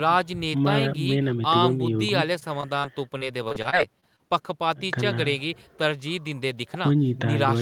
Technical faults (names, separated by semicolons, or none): repeated packet loss (robotic sound)